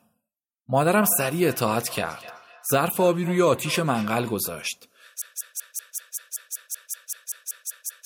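A second device in the same room is playing this speech call back into the first device's microphone, and that microphone's echo canceller cannot remove audio it did not play itself. The result is feedback echo between two devices from 0.94 to 4.42 s: each word comes round again roughly every 300 ms, thinner and ringing, peaking at about 17 dB below the speech. From 5.22 s to the end, a stall, likely in the player, encoder or stream, leaves it resending its last fragment. The result is a broken-record loop of one 191 ms piece repeated back to back 15 times, with the speech that should have followed lost.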